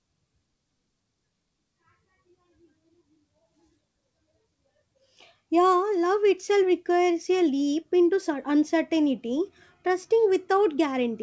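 No technical faults are audible.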